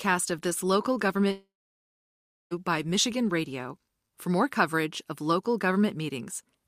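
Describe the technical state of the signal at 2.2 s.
Silence at that point: the brief buzz or hiss continuing the last sound has faded out. This is a long network dropout from 1.31 to 2.54 s, likely from about 1.2 s of audio never arriving.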